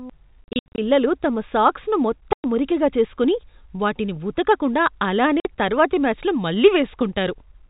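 From 0.44 to 0.78 s, the speech breaks up with packet loss filled with silence. About 240 ms of audio goes missing across that 340 ms stretch, in holes up to 70 ms long. Solid gaps follow at 2.33 to 2.44 s and 5.4 to 5.45 s. Packets never arrived, and the receiver played silence instead. Each hole starts and stops abruptly. The gap lengths fit 10 ms packets. Throughout, the G.711 telephone coding keeps everything below 4 kHz.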